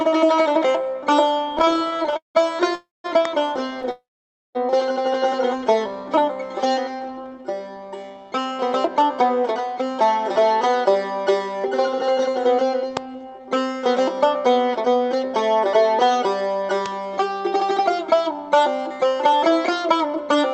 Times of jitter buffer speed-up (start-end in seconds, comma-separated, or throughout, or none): 6.86-12.00, 19.33-20.40